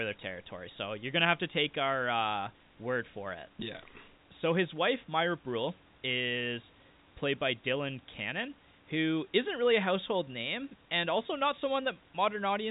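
No technical faults can be heard in this recording.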